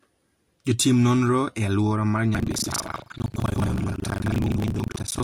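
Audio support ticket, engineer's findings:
Buffer tearing, 2.32 s to end. Writer and hardware read pointer slipped on the ring buffer, crossing inside each 40 ms period. About 40% of each period replays audio from about 150 ms earlier, hard joins both sides. Robotic 25 Hz buzz over the speech.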